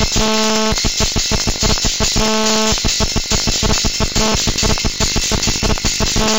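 Buffer tearing runs through the whole clip: the writing program and the playback hardware have slipped out of step, so a small slice of each 20 ms period replays audio from around 70 ms earlier, hard-spliced on both sides. This produces a steady robotic 50 Hz buzz wherever sound is present.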